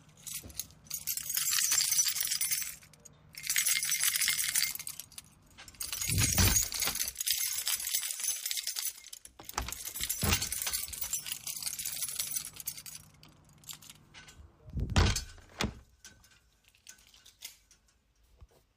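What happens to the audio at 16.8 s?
At 16.8 s the clip is inside a run of periodic USB or driver dropouts lasting from 0.10 to 18.70 s. Every 0.1 s a fraction of a millisecond is replaced by silence, producing steady ticks wherever sound is present.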